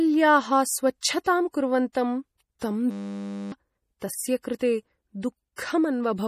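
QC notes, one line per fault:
Throughout, MP3 compression: plainly audible codec damage with a watery, swirly texture and nothing above 15.1 kHz. This is likely lossy encoding at a low bitrate, around 40 kbps, zeroing weak frequency lines. The spectrogram shows a flat ceiling at 15.1 kHz and speckled gaps that flicker frame to frame.
1.93–1.95 s, 2.59–2.62 s and 4.59 s, pre-echo: short hiss before sharp attacks, spreading 23, 27 and 17 ms ahead. Block-wide quantisation noise fills the quiet moment before each attack. Look for a noise smear ahead of each onset and a softened transient in the waveform.
2.91–3.52 s, system hang loop: a 10 ms piece of audio repeats 61 times, giving a steady buzz at 100 Hz, and about 0.7 s of real audio is lost. The waveform shows identical repeating cycles, and the spectrogram shows evenly spaced harmonics at multiples of 100 Hz.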